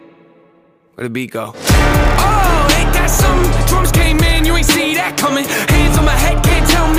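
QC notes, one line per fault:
No technical faults are audible in the signal at any point.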